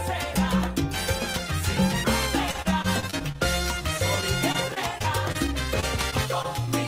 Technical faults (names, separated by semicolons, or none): repeated packet loss (robotic sound)